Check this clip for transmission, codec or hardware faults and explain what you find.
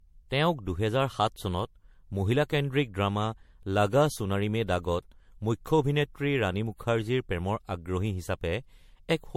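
One codec fault runs through the whole clip. Generation loss: swirly, hollow, smeared speech with blurred attacks, likely from about seven MP3 passes near 75 kbit/s. The spectrogram shows nothing above 16.5 kHz and growing spectral holes.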